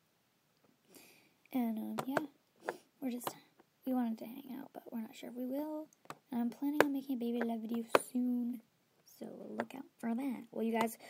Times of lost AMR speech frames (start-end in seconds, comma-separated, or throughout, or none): none